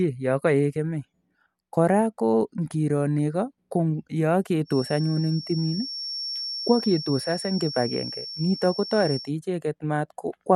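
From 4.64 s to 9.32 s a thin, steady whistle at 5.5 kHz sits behind the speech, roughly 10 dB below it, swelling and fading slowly in level. This is a feedback whistle, likely from a loudspeaker-to-microphone loop held just at the edge of feedback, so a single high frequency keeps ringing. Unlike a runaway feedback howl, it does not build into a howl, and unlike low mains hum, it is one high pitch that comes and goes with the loop.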